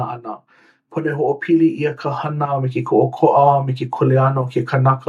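From 0.9 s to 2.86 s, automatic gain rising lifts the level by about 8 dB as the gain control, judging the input too quiet, steadily increases amplification. Unlike a talker moving closer, the background noise swells along with the speech, over roughly two seconds.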